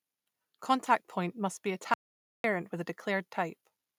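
Speech with an audio dropout to silence from 1.94 to 2.44 s, cutting in after "must be" and resuming before "with a". Unlike a natural pause, the 0.50 s gap is dead silence with no room tone, likely from the input being lost while recording continued.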